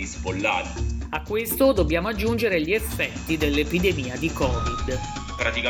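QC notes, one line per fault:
No faults found.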